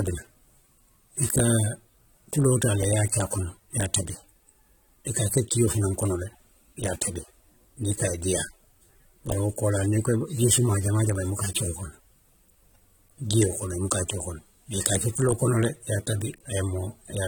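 Speech with plainly audible AAC compression damage throughout, likely from a low bitrate near 32 kbps: smeared, warbling texture, not a simple dull low-pass, though content reaches 19.4 kHz.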